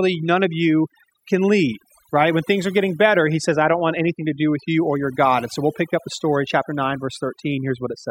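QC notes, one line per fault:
Throughout: overdone noise removal. The noise reduction was set too aggressively, so it drives individual frequency bands down to nothing whenever their level sits close to its noise estimate, and the quieter parts of the speech fall below that line and vanish with the noise. The background drops and breaks up into twinkling, chirpy specks.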